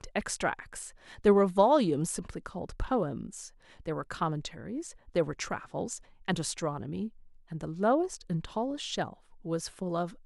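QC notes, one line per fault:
No audible faults anywhere in the speech recording.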